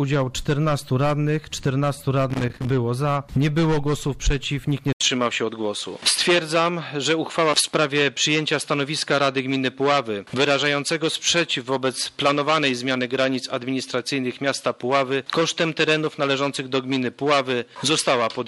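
A worn or dirty contact in the signal path made and broke repeatedly from 2.30 to 2.70 s, chopping the signal. The result is a short, irregular burst of loose connector crackle, a scratchy rattle lasting about 0.4 s.

At 4.93 s the input was likely switched to a poorer device. After an 80 ms gap, the sound from there to the end is cut off above 11.4 kHz and turns duller. A faint new background noise sits far below the signal, while the loudness stays about the same.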